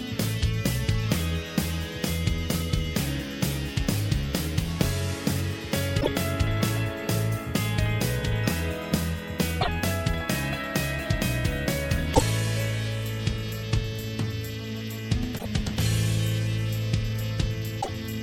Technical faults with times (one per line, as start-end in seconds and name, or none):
5.97-6.08 damaged data in a compressed stream
9.58-9.68 damaged data in a compressed stream
12.11-12.22 damaged data in a compressed stream
15.35-15.46 damaged data in a compressed stream
17.78-17.89 damaged data in a compressed stream